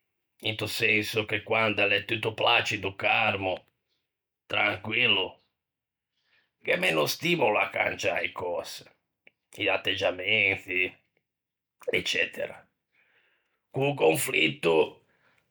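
No technical faults can be heard anywhere in this speech recording; the signal holds steady and intact throughout.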